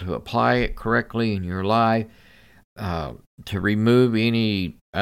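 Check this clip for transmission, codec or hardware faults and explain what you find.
Nothing to report here: I listened to the speech all the way along and couldn't pick out any fault at all.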